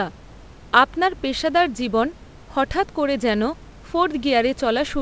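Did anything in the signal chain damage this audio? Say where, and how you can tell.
No, nothing in the chain has damaged this speech: the band stops at 8 kHz, as expected from a G.722 call path at 64 kbps, and the room's background noise sits about 29 dB below the speech.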